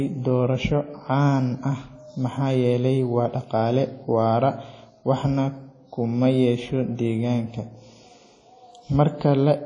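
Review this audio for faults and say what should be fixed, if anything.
The speech has a ringing, washy quality throughout, with hiss that swells and fades alongside the voice and nothing above 10.1 kHz. That points to likely WMA compression at a low bitrate, around 32 kbps, where long transform blocks smear quantisation noise and weak detail gets zeroed. Keep an uncompressed or higher-bitrate master and encode with a modern codec at a more generous rate.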